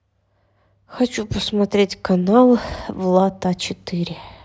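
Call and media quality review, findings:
Bit error spike at 3.70 s: single sharp tick, about -30 dBFS, broadband. One sample jumped by a power of two and snapped back; probably a flipped bit in memory or on a digital link.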